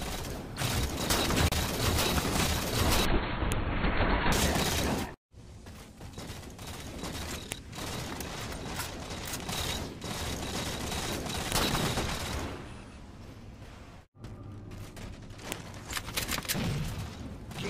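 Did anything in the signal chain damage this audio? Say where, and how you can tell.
Yes. The file header played as audio damaged it at the storage or file-joining stage: sharp clicks at 3.52, 7.52, 11.52 and 15.52 s, exactly 4.0 s apart. Pieces were concatenated with their WAV headers intact, so those header bytes play back as a brief burst of samples.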